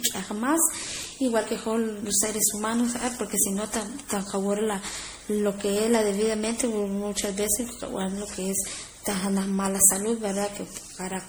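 Generation loss runs throughout the speech: swirly, smeared and hollow, with blurred attacks despite content reaching 20.8 kHz. The likely cause is repeated MP3 encoding, around seven passes at what sounds like 64 kbit/s, each re-quantising on a shifted frame grid and compounding spectral holes.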